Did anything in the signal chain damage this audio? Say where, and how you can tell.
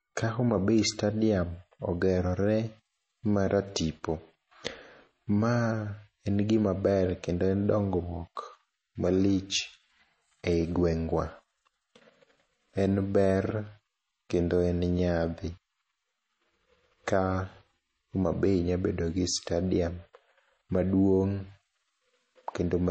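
Yes. The damage sits at the codec stage and runs through the whole speech clip. Nothing is heard above about 8.3 kHz, and sibilants sound watery and swirly. This is likely MP3 compression at a starved bitrate, which fits roughly 32 kbps, dropping treble and toggling weak spectral detail.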